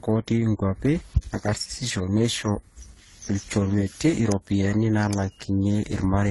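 A speech clip with two problems running the whole way through. First, there's a switching supply whistle: a thin, high tone drifting around between roughly 13.8 and 14.6 kHz, sitting maybe 25 dB or so under the speech. That's a switching regulator chattering in an audible burst mode or beating against another supply, and its pitch wanders as the load shifts. Second, the speech itself carries the artefacts of two different lossy codecs stacked on top of each other, and there's nothing in the speech above about 11.4 kHz. That's likely transcoding between lossy codecs, consistent with a low-rate Opus pass followed by AAC-LC at a modest bitrate. The second encoder spends its bits re-encoding the first one's damage and adds its own, and the lowest bandwidth cut in the chain is the one you end up with.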